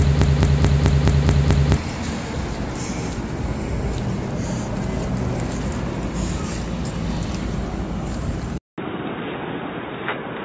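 From the very start until 1.77 s, a 215 ms fragment repeats exactly, seven times back to back, already under way when the clip opens. This broken-record loop likely comes from a stall replaying its last piece. Unlike an echo, nothing decays or overlaps, and the missing audio is simply lost.

At 8.58 s, after a 200 ms gap, the sound turns dull and boxy: likely input switched to a poorer device. The band narrows, the level falls by about 10 dB, and faint new background noise appears, which a filter change alone wouldn't cause.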